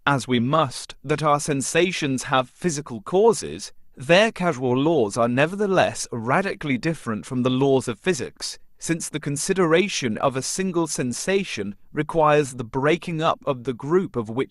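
Listening to this speech recording, nothing technical stood out as a problem at any point.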